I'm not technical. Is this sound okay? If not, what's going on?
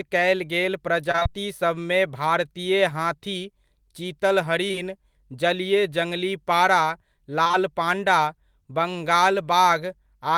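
No, there are a couple of glitches, both from bits of the call going missing on the way.

From 1.11 to 1.27 s there's repeated packet loss, which gives a robotic sound. In that sixth of a second, four small pieces of speech didn't arrive, the longest about 23 ms. Each time, the receiving end covered the hole by stretching out the last bit of sound it had. About half of that stretch is patched rather than real, so the speech comes out choppy and a bit mechanical.

Later there's short concealed packet loss in two spots: around 4.67 to 4.76 s, and around 7.43 to 7.55 s. Each spot is a few back-to-back gaps of roughly 20 ms, filled in the same way. You'd hear a quick smear or wobble, and a short sound like a consonant could get swallowed.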